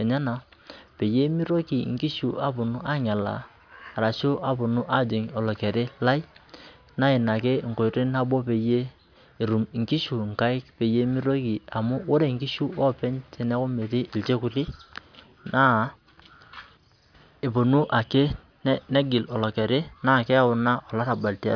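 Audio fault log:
Nothing stood out on listening to this speech recording.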